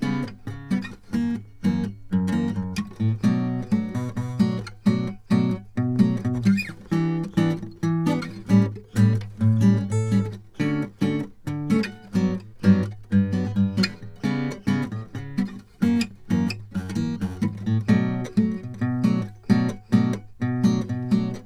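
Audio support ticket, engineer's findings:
Listened through the music clip and found nothing to flag, so no faults to report on this one.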